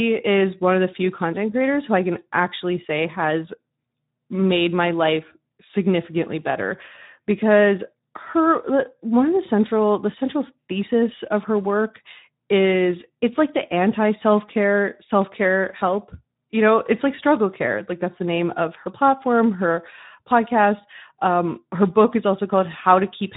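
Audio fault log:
throughout: Speex codec. The speech carries a plainly audible hoarse, noisy grain because the CELP coder has too few bits to model the excitation signal accurately. The degree of damage fits a low Speex bitrate of around 11 kbps.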